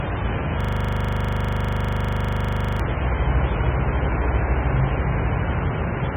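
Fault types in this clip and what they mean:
MP3 compression: Heavy data reduction, likely from MP3 encoding at a very low bitrate around 16 kbps, strips the treble completely above about 3.7 kHz. That leaves the sound dull and watery, with swirling, chirpy artefacts and smeared attacks. On a spectrogram there is a hard horizontal ceiling at 3.7 kHz with empty space above it, and below it patchy energy that flickers on and off from frame to frame.
System hang loop: From 0.61 to 2.80 s the playback freezes on one 40 ms fragment and repeats it exactly, about 55 times. The result is a steady 25 Hz buzzing stutter in place of the moving sound. On a waveform the same short shape repeats identically at perfectly even 40 ms spacing. On a spectrogram the section shows as vertical stripes, or as a static, unchanging pattern with fine harmonic lines 25 Hz apart.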